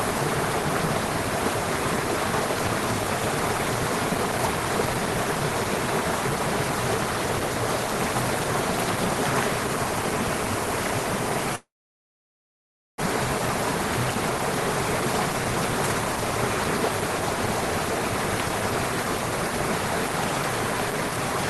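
A long network dropout runs from 11.55 s to 13.04 s. The break sounds like a stall in delivery, likely packets that never reached the receiver in time. The last sound carries on briefly as a fading buzz before giving way to about 1.3 s of silence. When audio resumes, it has skipped ahead, so about a second of material is simply gone. The playout timing also shifts by around 400 ms.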